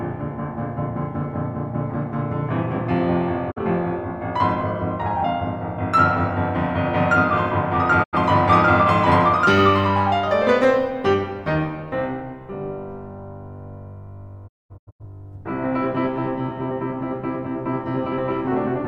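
Digital broadcast dropouts interrupt the music at 3.5–3.58 s, 8.02–8.18 s and 14.47–15.05 s. The receiver lost valid frames and muted, fading out over 20 ms each time. The first gap removes about 43 ms, which fits one lost frame. The second removes 85 ms, about two frames. The last is a cluster of short holes across 512 ms, totalling 384 ms with the longest run 213 ms. The music resumes later in the programme, with the missing material gone.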